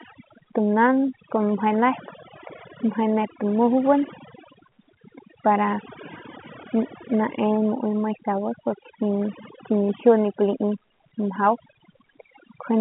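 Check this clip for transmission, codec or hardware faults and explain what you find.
One fault is present: overdone noise removal, running through the whole speech clip. A noise suppressor set far too aggressively is cutting individual frequency bands down or out whenever their level sits close to its noise estimate. The pauses collapse to near silence speckled with brief twinkling tones, and the softer parts of the voice are removed along with the noise. The telephone band, which stops a little below 4 kHz as expected for G.711 A-law, is not the cause.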